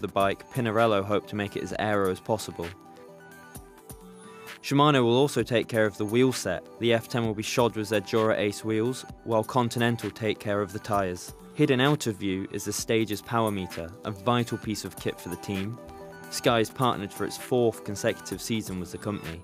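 No technical faults are audible.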